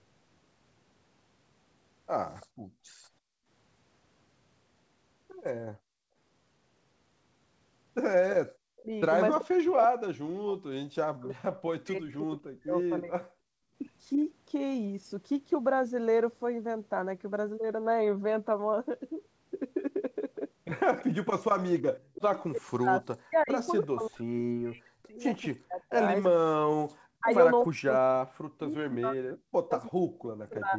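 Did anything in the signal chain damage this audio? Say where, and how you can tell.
Yes, the damage is in the call processing, specifically the echo canceller on the far end's loudspeaker side. There's an echo leak: a faint copy of the speech trailing about 339 ms behind, briefly at 2.40 to 2.46 s and again from 20.99 to 23.87 s, where it's roughly 20 dB down. It's likely residual loudspeaker pickup the canceller didn't fully subtract.

You'll also hear background gated by the echo canceller. The room tone suddenly drops out at 2.46 to 3.47 s (about 32 dB), 5.78 to 6.16 s (about 28 dB) and 13.50 to 13.76 s (about 31 dB). The canceller clamped the mic while the far side played, then released.

Finally, speech suppressed in double talk. From 8.6 to 13.22 s, and again from 21.96 s to the end, the talker dips and cuts out in pieces by up to roughly 40 dB. Both sides were likely talking at once, so the canceller turned everything down.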